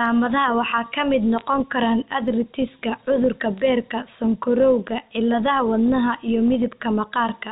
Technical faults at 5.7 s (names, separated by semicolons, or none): none